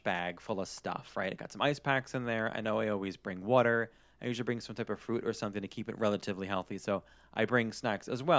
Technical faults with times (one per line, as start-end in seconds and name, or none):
none